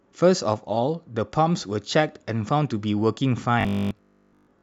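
From 3.61 s to the end of the speech clip, the sound turns into a rigid, metallic buzz. This is robotic sound from repeated short buffers. It likely comes from new audio arriving too seldom, so the player keeps looping the last short stretch instead. Most of that final second is such repeats, with the real audio skipped. The loops impose a fixed pitch of 50 Hz, which fits a 20 ms buffer. The buzz still loosely tracks the speech underneath.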